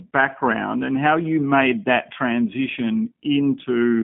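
From start to finish the speech sounds narrow, slightly rough and synthetic, with nothing above 3.5 kHz or below 150 Hz. This is G.729 codec damage: each 10 ms frame is rebuilt from a vocal tract model and a few pulses, consistent with 8 kbit/s G.729A.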